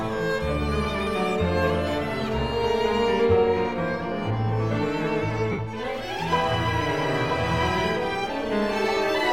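At about 5.52 s the music hits a stretch of lost LE Audio frames, lasting roughly 67.5 ms until around 5.59 s. The Bluetooth link dropped data, and the LC3 decoder filled the gap by reusing the last good spectrum with its signs scrambled, then fading it. Tones blur into a brief noisy smear that sinks away. The length fits about nine LC3 frames at 7.5 ms each.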